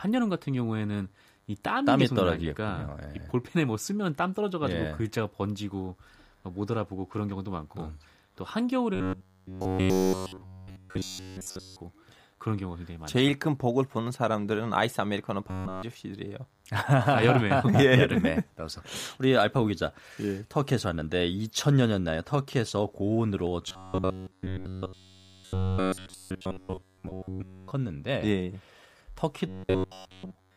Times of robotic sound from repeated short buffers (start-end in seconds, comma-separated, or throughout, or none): 8.95-11.81, 15.49-15.83, 23.68-27.71, 29.48-30.56